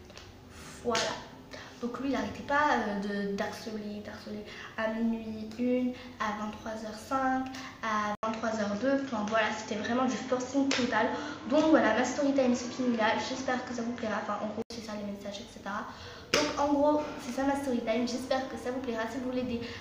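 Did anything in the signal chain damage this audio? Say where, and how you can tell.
Yes. At 8.15 s there's an 80 ms gap; until 14.70 s the spectrogram cuts off at 7.6 kHz, with a level shift and new noise floor. Likely the input switched to a poorer device.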